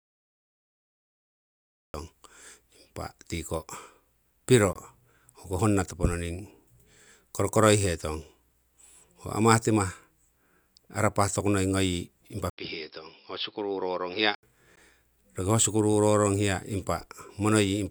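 Cut-off start, 0 to 1.94 s: the clip opens on digital silence, and the speech enters abruptly at 1.94 s, already mid-sound. There is no natural onset or fade-in. The recording or stream began after the talker had started, so the first part of the sound was never captured, and the audio jumps straight from nothing to full level.

Gap at a join of encoded pieces, 4.73 to 4.76 s: a dropout of about 24 ms cuts into continuous speech, its edges smeared by the codec, and the sound resumes exactly where it stopped. The same fault returns at 14.76 s as a 16 ms hole. The two gaps fall 10 s apart, which points to the audio being encoded in 10-second pieces and joined untrimmed. Each piece's encoder start-up delay and final-frame padding were left in.

Input switched to a poorer device, 12.50 to 14.43 s: an 80 ms silence marks the change, and after it the speech turns duller and boxier. Nothing above 5.4 kHz survives, the level drops a little, by roughly 5 dB, and a new, faint background noise appears well beneath the speech. 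The likely cause is the system swapping its input mid-recording to a narrower-band microphone or a headset call profile, with its own tone and noise floor.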